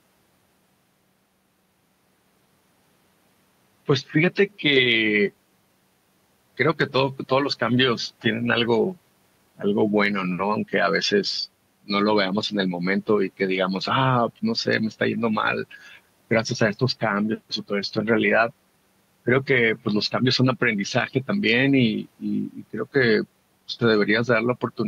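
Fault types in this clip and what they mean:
No faults are audible anywhere in this speech.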